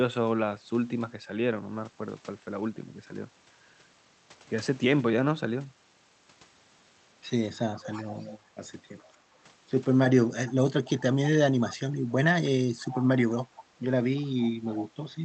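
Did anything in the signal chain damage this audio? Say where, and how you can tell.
Yes: an echo leak in call processing. A faint, delayed copy of the speech trails it by 315 ms at 7.73–8.38, 9.06–9.10, 10.48–10.54, 10.85–11.01, 11.69–11.77, 12.81–13.64 and 14.15–14.86 s, roughly 15 to 35 dB down. On a spectrogram, ghost harmonics repeat 315 ms later. The likely cause is a far-end echo canceller letting loudspeaker pickup through.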